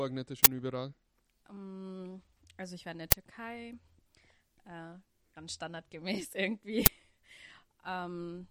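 At 0.44 to 0.46 s there's a sudden, loud burst of harsh digital noise, the classic uninitialised buffer. A block got sent to the output before any audio had been written into it, so whatever junk sat in that memory played out as samples. It happens twice more as shorter 10 ms hits, at 3.12 s right after "ich war in der" and again at 6.86 s. The 20 ms and 10 ms lengths fit buffer-sized blocks.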